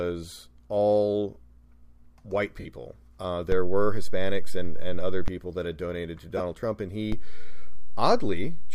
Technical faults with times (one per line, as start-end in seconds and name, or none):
2.60-2.66 lost LE Audio frames
3.52-5.28 DC step
6.37-6.40 lost LE Audio frames
7.12-8.75 DC step